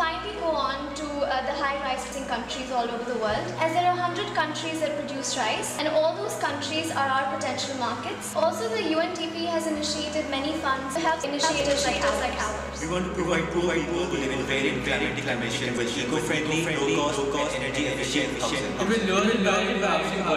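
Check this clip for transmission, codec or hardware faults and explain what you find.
One fault is present: a doubled audio track. From 11.43 s to the end, a second full-band copy of the sound runs alongside the first. It trails by roughly 400 ms and is about as loud as the original. It starts abruptly and has no decay or room colour. The likely cause is the same audio mixed in twice. It was either captured again by a slower path, or an edit left two copies out of step. Everything is heard twice, as a flat, exact repeat.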